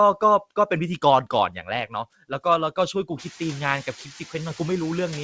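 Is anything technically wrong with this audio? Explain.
Yes. From 1.5 to 1.68 s there is speech cut by the noise suppressor. It mistook quiet speech for noise and pulled it down by up to about 8 dB for about a tenth of a second, so the sound turns faint and swallowed. Unlike a packet-loss dropout, it dips rather than going silent.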